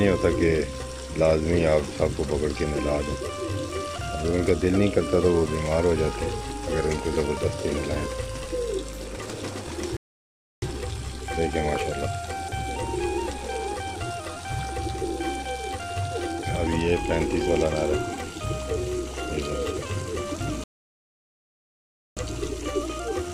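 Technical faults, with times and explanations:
9.97–10.62 s and 20.64–22.17 s: rebuffering stall. The player's buffer ran dry, so the sound drops to silence for 0.65 s and 1.53 s, then picks up exactly where it stopped.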